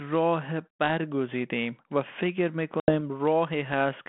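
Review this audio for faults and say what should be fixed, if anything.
Packet loss on the ADPCM call leaves an 80 ms silent gap with hard edges from 2.80 s to 2.95 s, about four packets' worth. Because G.726 at 32 kbit/s codes only differences from an adaptive prediction, the decoder's predictor and step size drift from the sender's across the gap. Speech therefore comes back slightly distorted and settles within some tens of milliseconds. To prevent this, add packet loss concealment and a jitter buffer, and resynchronise or reset the decoder state after each gap.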